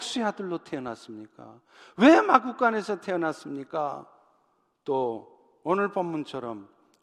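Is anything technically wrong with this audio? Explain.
No, nothing technically wrong stood out on listening to this speech recording.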